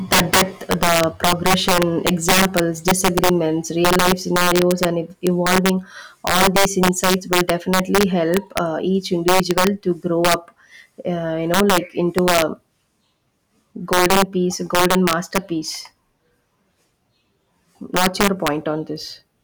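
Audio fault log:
Throughout: integer overflow. The speech is driven about 10 dB past the integer ceiling, and instead of being held at full scale, the loudest peaks (roughly one or two percent of samples) wrap to the opposite extreme. Each wrap is a sudden jump across the full range, heard as harsh cracks on the loudest peaks, sharper than clipping. The waveform shows spikes snapping abruptly from one polarity to the other, and the spectrogram shows thin vertical broadband streaks at each loud peak.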